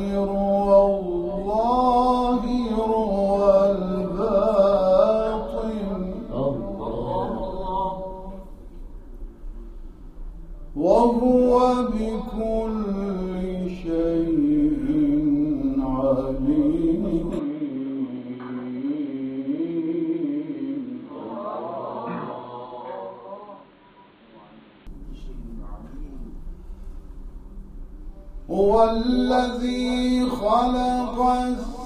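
From 17.39 s to 24.87 s the sound suddenly goes dull and boxy. Nothing comes through above about 4.4 kHz, the level drops by about 5 dB, and new background noise shows up roughly 30 dB under the signal. The change is instant, with no gap at either edge, and at 24.87 s the full band comes straight back. That points to an input switched to a poorer device, likely a fallback mic or a headset's call profile, then switched back.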